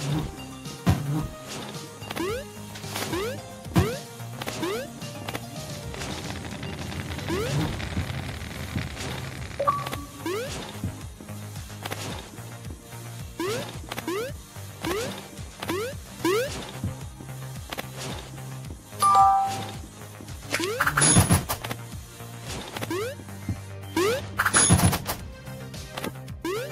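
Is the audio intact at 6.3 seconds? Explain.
Yes, the audio at 6.3 seconds is intact, with no dropout, click, distortion or other fault at that moment.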